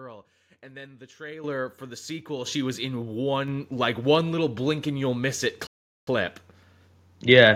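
At 1.44 s, right after "and then the", the microphone volume steps up by about 10 dB, and it does so twice more: at 2.46 s after "for the sequel" (about 6 dB) and at 3.48 s after "sequel she was in" (about 3 dB). The call software kept judging the input too quiet and nudging the device gain in single jumps, so the voice and the room noise lurch louder together, mid-sentence, each step smaller than the last.

Then from 5.67 to 6.07 s there's a playback stall. The sound just cuts out for 402 ms in the middle of the flow before carrying on. That's most likely the player running dry of data or its thread getting blocked, leaving the output silent until it caught up again.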